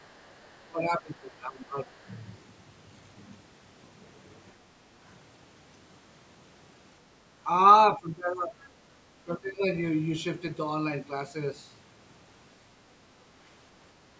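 Right from the start, 0.0 to 0.67 s, there's a faint second voice sitting about 35 dB under the speech: the other side's voice leaking through, likely loudspeaker echo the canceller didn't fully remove. From 0.66 to 2.05 s the speech itself dips by as much as about 20 dB and thins out in patches, which points to speech suppressed in double talk, the canceller turning everything down while both sides overlap. More leaked voice follows at 1.99 to 2.21 s, about 30 dB down, and a tiny scrap at 5.08 to 5.12 s, about 40 dB down. The speech ducks again from 7.95 to 8.6 s, another short leak pokes through at 8.62 to 8.68 s, and a final suppression dip hits from 9.07 to 9.62 s.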